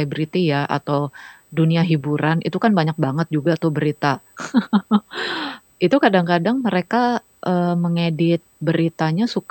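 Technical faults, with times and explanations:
Throughout, USB whine: the bus draws current in bursts every 125 microseconds, the microframe rate, and that ripple leaks into the audio through shared power or ground. The result is a steady, fixed-pitch whine with a fundamental at 8 kHz and its strongest component at 16 kHz. It sits roughly 40 dB below the speech and never shifts in pitch, so it is heard as a faint, thin, high tone running under the whole recording.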